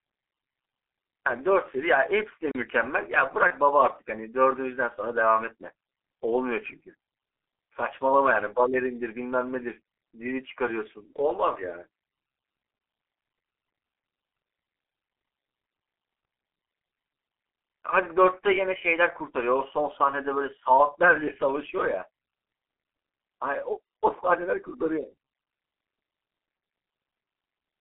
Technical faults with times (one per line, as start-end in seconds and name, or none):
0.00-27.80 G.723.1 codec
2.51-2.55 block of digital silence
3.47-3.52 VoIP packet loss concealed by the speech codec